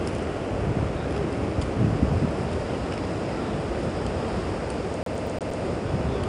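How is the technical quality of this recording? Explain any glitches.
The recording has two clear faults. 4-bit ADPCM compression runs throughout: each sample is coded as a coarse 4-bit step from a prediction, giving gritty hiss that tracks loudness, roughened attacks, and nothing above 10.6 kHz, which fits a bitrate near 89 kbps. From 5.03 to 5.63 s, a CD stuck on one turn repeats a 0.12 s slice five times, with brief mutes at each laser jump, producing a fast, even stutter.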